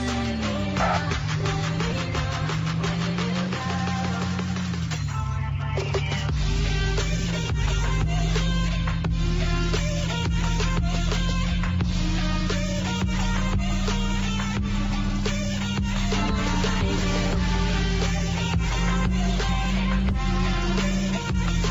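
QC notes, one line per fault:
No technical faults are present; the signal holds steady with no disruptions or defects at any point.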